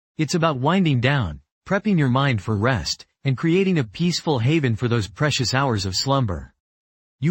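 Nothing technically wrong can be heard in this audio. Its level, timing and continuity hold steady throughout, with no event that calls for a time or a cause.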